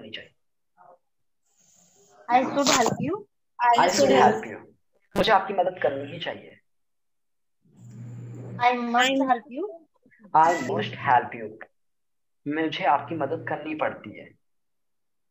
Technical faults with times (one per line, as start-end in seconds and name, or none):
4.95-5.29 robotic sound from repeated short buffers